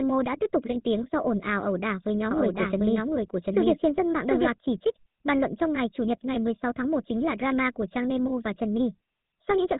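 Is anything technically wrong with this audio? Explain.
Yes. GSM full-rate codec, throughout: the voice is modelled and driven by sparse pulses, giving plainly audible buzzy roughness and nothing above 3.8 kHz, which fits 13 kbps GSM coding.

Doubled audio track, 2.31 to 4.51 s, ending just before "chỉ trích bàn luận": a full-band copy about as loud trails by roughly 0.7 s, likely a second capture path, starting and stopping abruptly.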